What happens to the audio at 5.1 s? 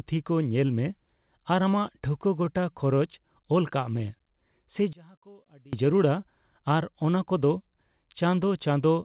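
One channel has likely been flipped in polarity from 4.93 to 5.73 s, so when the two sides are summed to mono, the speech they share cancels instead of adding. The level drops by about 27 dB for those 0.8 s, leaving only a faint residue of the voice, already band-limited below 4 kHz by the G.711 call path, before full level returns at 5.73 s.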